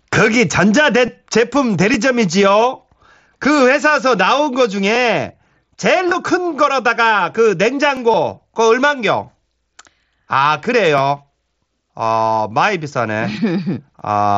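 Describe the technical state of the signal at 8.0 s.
Overlapping chunks at 7.97 s: at this chunk join, the next block of audio begins before the previous one has finished, so about 13 ms of speech plays twice in immediate succession. That brief doubling breaks the waveform's continuity and is heard as a click or stutter right at the seam. Its position fits speech handled in 3-second chunks. The mSBC headset coding, with its 8 kHz bandwidth, carries through this moment as well.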